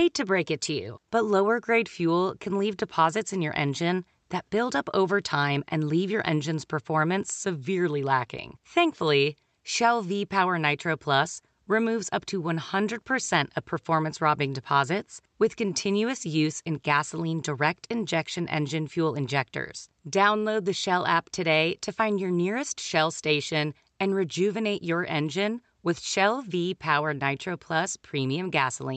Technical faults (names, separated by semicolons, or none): none